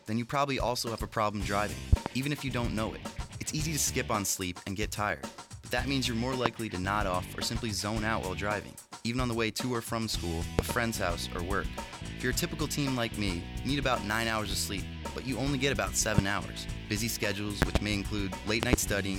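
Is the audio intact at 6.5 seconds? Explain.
No. From 6.46 to 6.49 s a single loud pop, a sharp thump peaking about 25 dB above the surrounding level, sits on top of the audio, which carries on beneath it without a break. The likely cause is a sudden voltage step or spike, such as a plug, a switch, static discharge or a driver glitch, entering the signal chain, where the following circuits shaped it into this brief, hard transient.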